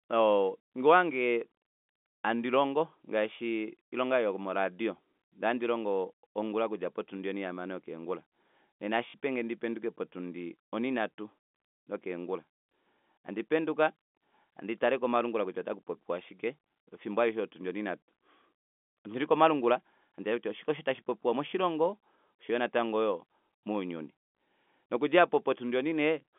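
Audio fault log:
9.10–9.14 s: packet loss with last packet repeated. About 40 ms went missing and was filled by replaying the previous packet. The repeated run gives a brief robotic stutter rather than a silent gap or a smooth fade.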